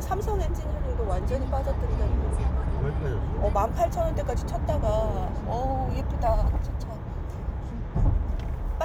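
Nothing here trips the ear: the audio runs along without any technical faults to point out at any moment.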